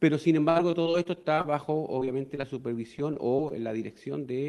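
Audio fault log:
0.49–1.56 s, 1.99–2.45 s and 2.99–3.52 s: repeated packet loss (robotic sound). Holes of up to 60 ms recur and are bridged by repeating the previous sound, giving a choppy texture with pieces missing rather than a single clean dropout.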